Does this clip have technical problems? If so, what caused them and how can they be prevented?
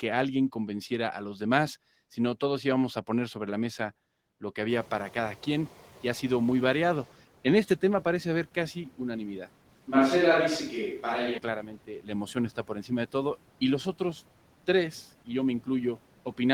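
Yes. Noise suppressor catching up: when the room noise jumps by about 19 dB near 4.5 s, the suppressor's noise estimate lags. From 4.69 to 7.09 s the noise passes with little reduction, then sinks by about 9 dB as the estimate adapts over 2.4 s. A suppressor with faster noise tracking, or steadier room conditions, would prevent this.

Switch to a distant microphone: from 9.70 to 11.38 s the voice turns roomy and hollow, with thinner bass and almost no change in level. The background stays well below the speech. The likely cause is that the close microphone dropped out and a more distant one took over. Securing the close microphone's connection and monitoring its signal would prevent this.

Speech cut by the noise suppressor: from 11.87 to 12.10 s and from 12.56 to 12.91 s, the suppressor mistakes brief stretches of speech for noise and pulls them down by up to about 11 dB, so they sound swallowed. 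Gentler suppression settings, or a better speech-versus-noise decision, would prevent this.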